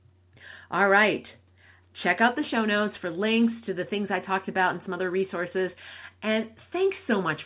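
No faults are audible anywhere in this speech.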